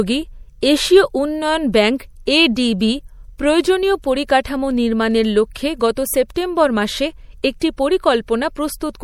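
From start to finish, the speech carries plainly audible coding damage, most likely from MP3 compression. The damage fits a low bitrate of about 64 kbps. MP3 splits the sound into narrow frequency lines and spends its limited bits where its hearing model says they count. Lines judged too weak are dropped. At this rate, too few bits remain, and the losses are clearly heard across the whole clip. Nothing is present above 20.9 kHz.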